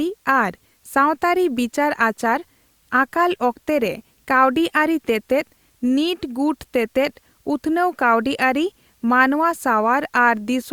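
Speech, with low bit depth with dither present from start to finish. A constant, even hiss sits under the speech, roughly 40 dB below the signal, and stays the same level through pauses. The samples were rounded to very few levels with dither added first, which turns the rounding error into steady white noise rather than distortion. No gritty or level-dependent artefacts appear, and the noise floor fits about 10-bit quantisation.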